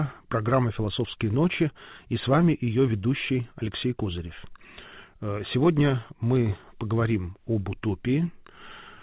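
Nothing here stands out as a fault; the audio comes over a call link that sounds like G.711 A-law at 64 kbps, so there's nothing above 4 kHz, which is just how that kind of path carries sound.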